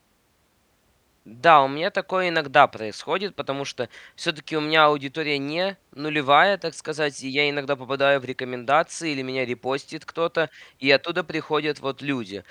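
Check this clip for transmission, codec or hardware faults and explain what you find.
No faults turned up when I checked the clip.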